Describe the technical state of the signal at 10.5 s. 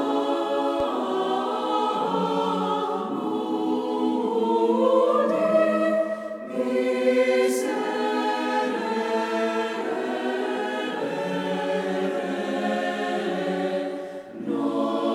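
At 10.5 s the signal is intact, with no audible fault at that moment.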